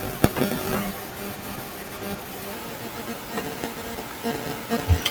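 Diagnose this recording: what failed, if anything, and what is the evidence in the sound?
From 2.53 s to the end, the speech jumps to 1.16 times speed and rises about three semitones: a section at the wrong speed, likely from playback or editing against the wrong clock. On a spectrogram, harmonics and formants step upward at 2.53 s; the waveform's syllables compress in time.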